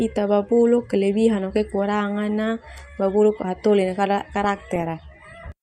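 At 4.43 s, DAB burbling sets in and runs to 4.83 s. The speech gains short blips of noise. This is weak reception. Bit errors, here at a rate of well under one percent, slip past the error correction into the MP2 audio data. Corrupted samples put short blips of noise into single sub-bands, and corrupted scale factors throw sub-bands up or down in level, frame by frame. The burst suggests a run of damaged frames across that stretch.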